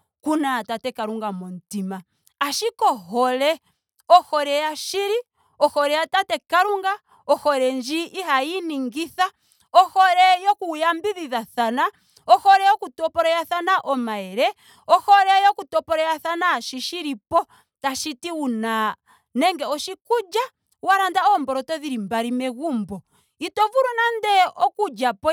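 No faults are present anywhere in this speech recording.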